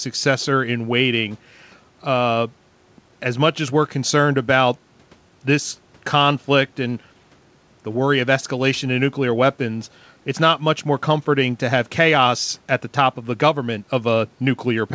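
Nothing in this speech recording stood out as a technical problem on listening.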